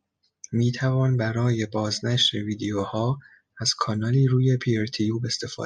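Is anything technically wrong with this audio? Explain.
No, nothing technically wrong stood out on listening to this speech clip.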